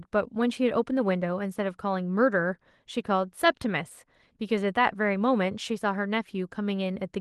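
No technical faults are audible in this recording.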